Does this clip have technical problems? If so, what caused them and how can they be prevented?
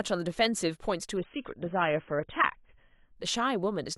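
Yes. From 1.17 to 3.17 s an adaptive stream at a lower bitrate takes over: the treble vanishes above 3.8 kHz and artefacts rise, switching suddenly without a gap, unlike a dropout. A steadier connection or larger playback buffer would prevent it.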